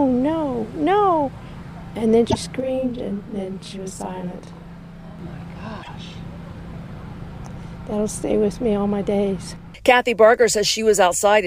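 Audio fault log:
2.29–2.36 s and 5.82–5.89 s, broken MP3 bit reservoir: brief 64 ms glitches as audio skips ahead, likely frames reading borrowed bytes from the wrong, earlier 24 ms frame.
2.60–5.19 s, channel delay (doubling): one channel runs 40 ms late and sums to mono, giving an equal-level doubled, slapback sound.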